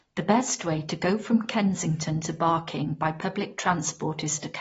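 From start to finish the speech sounds dull and swirly, with nothing above about 7.6 kHz, so the top end is simply missing. Sibilants come out fizzy and smeared rather than crisp. That's most likely AAC compression, specifically AAC-LC run at a low bitrate, which fits something around 24 kbps. At that rate the encoder drops the cut-off and starves the upper bands, leaving gaps and warbly texture in what's left.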